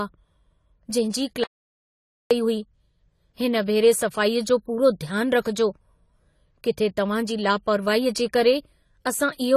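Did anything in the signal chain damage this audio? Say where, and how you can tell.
Yes. Three kinds of fault are audible, two from the codec stage and one from the input.

AAC compression affects the whole clip. Nothing is present above 14 kHz, so the top of the spectrum is simply missing. The codec damage is plainly audible throughout the speech. The sound points to AAC-LC at a low bitrate, around 32 kbps. This is likely the cause. At that rate the encoder lowers its cut-off and coarsely quantises what it keeps. That leaves the dull, smeared texture heard here.

An audio dropout to silence runs from 1.44 s to 2.31 s, about 0.87 s in total. The speech stops abruptly and returns abruptly. The gap holds no room tone at all, just silence. That points to the input being lost while recording carried on writing silence. The likely reason is a disconnected device, a failed link or a stray mute. 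The sound alone cannot say which. Whatever was spoken in that gap is gone.

Pre-echo sits at 5.41 s, just before a sharp attack. It spreads about 41 ms ahead of the onset. This is also a codec fault. The encoder spreads quantisation noise across a whole transform block. When a sudden attack lands late in that block, noise sized for the loud part leaks into the quiet moment before it. You hear it as a brief hiss ahead of the attack, which softens the onset.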